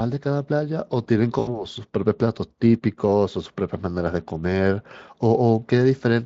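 A speech clip carried over Speex, with light coding grain, has one fault. From 1.39 to 1.65 s there is VoIP packet loss concealed by the speech codec. About 80 ms of audio went missing. The decoder stretched its last sound into a fading buzzy tone or coloured noise. The voice stays thin until it recovers.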